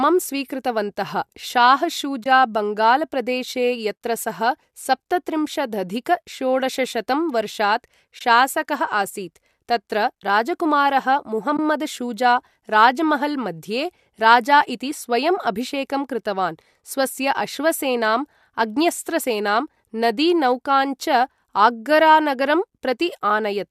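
A speech recording with three short dropouts from AAC frame loss with muting, at 2.24 to 2.26 s, 8.19 to 8.21 s and 11.57 to 11.59 s. Each is a brief, soft-edged hole about 20 ms long, which fits two lost frames of roughly 10 ms each. The decoder zeroed those frames, and the overlapping windows fade the sound smoothly out and back in. On a waveform each gap looks like a narrow tapered pinch to near silence. On a spectrogram it appears as a thin vertical blank band across all frequencies. The slight coding texture throughout is light, likely from low-delay AAC compression.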